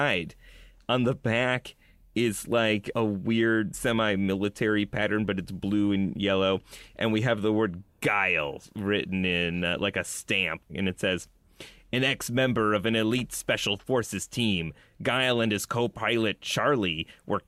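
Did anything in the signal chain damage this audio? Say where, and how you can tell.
No, nothing in the signal chain damaged this audio.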